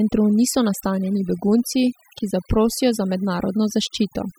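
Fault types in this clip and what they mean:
overdone noise removal: Across the whole clip the gaps between phrases fall to an unnaturally dead near-silence dotted with twinkling, chirpy specks. This comes from a noise reduction process pushed too hard: any frequency band that sits close to its estimate of the background is pulled down or cut entirely, so the softer parts of the speech are removed together with the noise.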